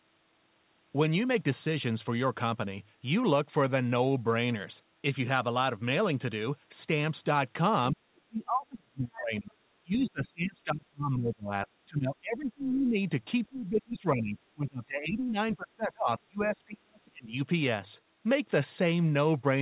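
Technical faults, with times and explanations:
7.92–9.56, 9.82–11.52, 11.86–12.98, 13.48–14.38, 14.54–15.38 and 15.56–17.34 s: speech suppressed in double talk. The echo canceller most likely mistook the talker for loudspeaker echo while both sides spoke, and turned everything down. The voice dips by about 20 to 35 dB.
9.13–9.17 and 10.08–10.28 s: other side's voice leaking through. The echo canceller likely left part of the loudspeaker signal in the microphone, so brief scraps of a second voice come through, about 25 dB below the talker, during the first suppressed stretches.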